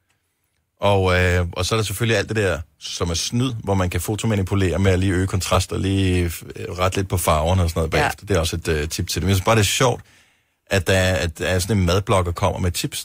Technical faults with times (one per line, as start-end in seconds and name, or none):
3.49 compressed frames skipped